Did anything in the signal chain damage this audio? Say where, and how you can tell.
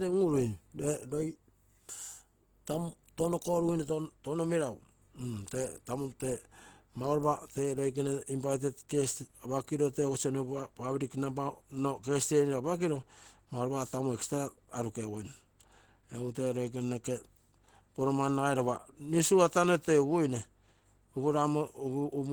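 Yes, at the codec stage, throughout the speech. It sounds hoarse, grainy and muffled, the likely result of Opus compression in its hybrid speech mode, consistent with a 16 kbps stream. A spectrogram would show full-band content up to about 20.1 kHz, with noise-filled, smeared upper bands.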